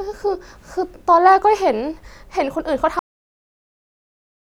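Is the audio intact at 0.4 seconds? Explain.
Yes, the speech is intact at 0.4 seconds, with no audible fault at that moment.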